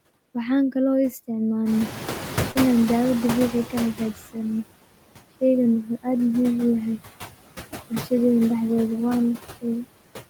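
It's a speech clip, and there's noise suppressor artifacts all the way through: the suppressor pulls the background down by about 16 dB, so the noise dips between phrases and creeps back up under the voice. Around one and a half seconds the room noise jumps by about 14 dB, and from 1.65 to 4.12 s you hear the noise suppressor catching up. Its noise estimate lags the jump, so the louder noise comes through cut by only about 11 dB at first, then settles down over roughly 2.5 s as it adapts. In the middle of that, at 2.51 to 2.58 s, there's a short concealed packet loss: about 40 ms of audio never arrived, and the receiver papered over it by extending the preceding sound before blending back in, which comes across as a quick smear.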